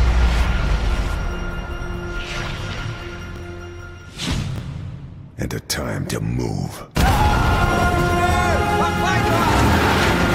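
At 3.36 to 3.40 s, and again at 4.56 to 4.60 s, there's a brief jumbled blip: chunks out of order. A 20 ms chunk landed one slot late and swapped places with its neighbour, so nothing's missing, just scrambled, with three hard joins each time.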